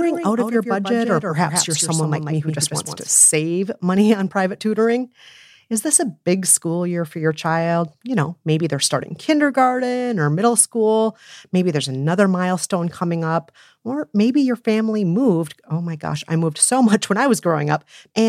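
A doubled audio track runs from the start of the speech to 3.08 s: a second full-band copy trails about 150 ms behind, roughly 5 dB quieter, with no decay or room colour, likely from a slower capture path, then cuts off abruptly.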